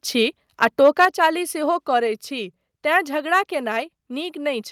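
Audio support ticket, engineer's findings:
Microphone overload, 0.62 to 1.26 s. Harsh crackle on the loudest syllables. Likely input gain set too high, peaks driven about 5 dB past converter full scale. Waveform: flattened tops on the peaks, around 2% of samples pinned at the rail. Spectrogram: broadband vertical smears above the speech harmonics at each clipped peak.

Microphone volume stepped down, 1.05 s. Speech and room noise drop abruptly by about 5 dB, mid-distortion. Likely automatic gain control in the call software cutting device input after detecting clipping. Waveform: sudden one-step envelope shrink. Spectrogram: the whole band, noise floor included, dims at a single vertical line.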